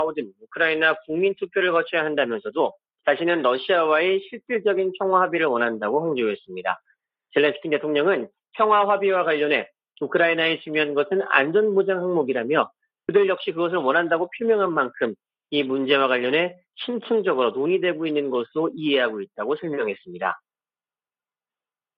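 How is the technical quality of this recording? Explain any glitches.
One glitch stands out near the start. From 0.27 to 0.47 s, the noise suppressor cuts the sound, mistaking it for noise and pulling it down by about 22 dB. Unlike a dropout, the sound sinks rather than vanishing abruptly.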